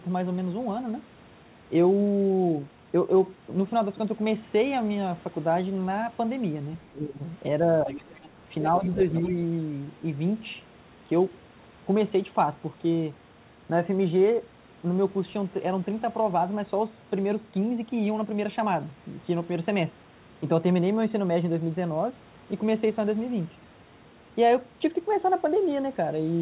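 From 6.89 to 7.23 s, the echo canceller likely clamped down during double talk: the speech is suppressed in double talk, dipping by roughly 15 dB. From 7.86 to 8.29 s, likely leftover loudspeaker echo lets the other side's voice leak through, about 15 dB below the talker. At 8.62 to 9.0 s a milder suppression of about 5 dB recurs, overlapped from 8.96 to 9.21 s by louder leakage, about 10 dB down. All of it sits in a band ending at 4 kHz, consistent with a G.711 A-law call.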